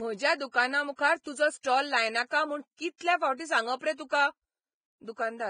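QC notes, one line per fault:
Throughout, Vorbis compression: nothing is heard above 9.7 kHz, and the remaining treble of the speech is hissy and grainy, with roughened tones and softened onsets. The damage is heavy and fits a low-rate encode, likely Vorbis at around 21 kbps. The encoder keeps a smooth spectral outline but quantises the high-band detail so coarsely that it turns into noise of similar energy, and it drops the top band entirely.
0.51, 1.23, 1.61, 2.28 and 2.98 s, pre-echo: a brief hiss leads each of these attacks by 24 to 34 ms, and the attacks themselves sound smeared rather than crisp. The transform codec spreads its quantisation noise across a whole block. When a sharp onset lands late in a block, noise sized for the loud part also fills the quiet stretch before it. This becomes audible as a wash just ahead of the attack.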